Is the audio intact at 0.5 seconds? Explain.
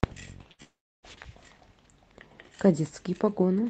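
No. From about 0.51 to 0.62 s this speech has a burst of packet loss. A run of audio never arrived in time, so the receiver stretched the last sound it had, about 74 ms of it, while fading it down, and then jumped ahead past roughly 80 ms of lost material. You hear a brief held buzz or fading hiss followed by a skip. Unlike a hard dropout to silence, the gap is filled rather than empty.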